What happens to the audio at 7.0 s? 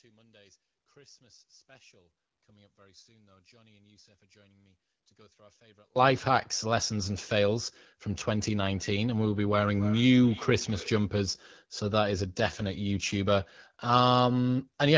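Nothing goes wrong at 7.0 s; the speech carries straight through that moment intact.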